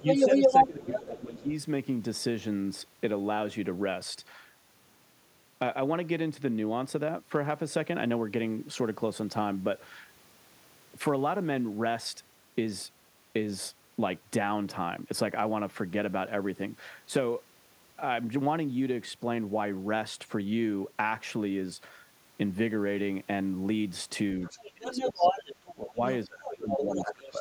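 A speech clip where the other side's voice leaks through at 0 to 0.67 s, 24.44 to 25.74 s, 26.45 to 26.6 s and 26.78 s to the end. It's loud at the start, well above the talker, then comparable and fainter, likely speakerphone echo the canceller didn't fully remove. Speech is also suppressed in double talk at 0 to 1.49 s, 24.74 to 25.41 s, 25.73 to 26.02 s and 26.25 s to the end, dipping by about 15 to 25 dB. That's likely the canceller ducking everything while both sides talked at once.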